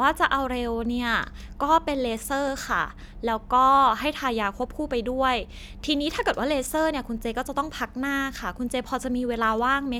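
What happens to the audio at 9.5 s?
Nothing goes wrong at 9.5 s; the speech carries on intact through that moment, with no dropout, click, distortion or other fault to be heard.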